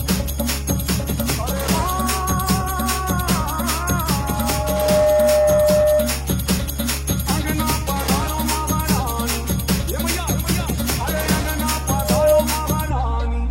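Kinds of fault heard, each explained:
Loudspeaker feedback squeal: a microphone picks up its own loudspeaker, and at 607 Hz the loop gain passes one, so that tone keeps feeding itself. From 4.2 to 6.27 s it swells over most of a second to sit about 5 dB above the other sound. From 11.87 to 12.44 s it rises faster and louder, about 10 dB over. Unlike steady hum or a test tone, it builds from nothing.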